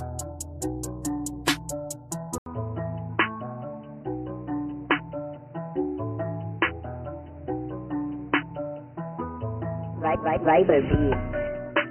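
An input switched to a poorer device at 2.38 s, likely a change to another microphone or a headset's call profile. After an 80 ms silence, the sound turns dull and boxy, with nothing above 3 kHz, and a new background noise appears about 35 dB below the signal while the level stays about the same.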